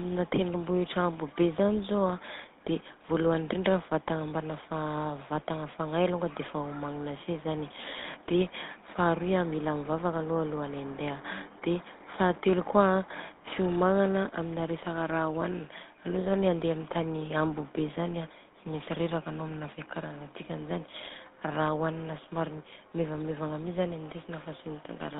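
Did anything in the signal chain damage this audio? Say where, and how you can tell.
Yes, the codec stage did, for the whole clip. The speech went through the GSM full-rate codec, which models the vocal tract and drives it with coarse, regularly spaced pulses. That gives a buzzy, gravelly roughness, and the band is cut to roughly 200 Hz–3.7 kHz. The 13 kbps rate points to the original GSM coder.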